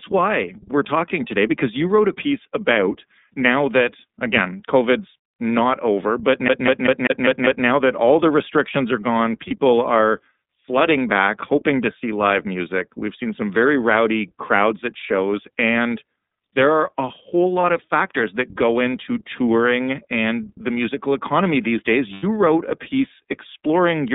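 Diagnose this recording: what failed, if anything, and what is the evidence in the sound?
The codec stage is at fault. This speech is carried by the iLBC codec throughout, limited to roughly 200 Hz to 3.7 kHz, with a plainly audible rough, synthetic edge. Each frame's excitation is coded independently, which fits the 13.33 kbps mode with 30 ms frames.

The network stage shows lost iLBC frames at 9.47–9.52 s, 17.60–17.64 s and 22.13–22.24 s. The decoder fills each gap with a repeated, noise-mixed pitch cycle that sounds like a held, buzzy vowel. The first two gaps fit one lost frame each, and the longer third fits about three.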